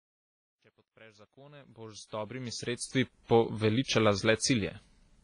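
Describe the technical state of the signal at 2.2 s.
At 2.2 s the speech sits inside a fade carrying truncation distortion, running from 0.0 to 3.14 s. The gain stage drops low bits without dither, consistent with roughly 11-bit resolution, so the waveform shows stepped, squared contours and sound turns gritty. The roughest stretch, 0.0 to 1.79 s, has already passed.

Across the whole clip, heavy damage likely comes from WMA compression at a rate suggesting about 24 kbps. Long transform blocks smear quantisation noise in time, giving a ringing, washy hiss that pumps with the speech. A spectrogram shows nothing above 10.4 kHz and patchy, dropped-out weak components.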